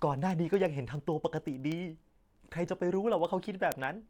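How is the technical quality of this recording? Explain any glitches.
The recording has a clear clocking fault. Word clock ticks run through almost the whole clip, from 0.13 s to 4.07 s. They sound like a train of sharp clicks of uneven strength under the speech, roughly twenty per second and some seventy in all. A receiving device running on its own clock, not locked to the sender's digital link, drifts against it by a few hundred parts per million. Each time the two clocks slip, one sample is dropped or repeated, leaving a tick.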